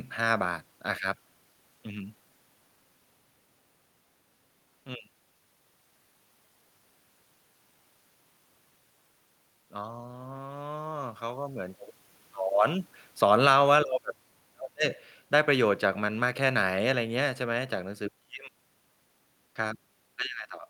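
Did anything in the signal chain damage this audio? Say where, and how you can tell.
Yes. From 9.69 to 11.82 s the speech and the room noise behind it swell together by about 3 dB. That is automatic gain rising in the call processing, where the gain control judged the input too quiet and raised its gain over about two seconds.

From 12.59 to 14.3 s the level sinks by about 3 dB, again carrying the room noise down with the speech. This is automatic gain falling: the gain control judged the input too loud, just after the talker moved around 12.5 s, and eased its gain back.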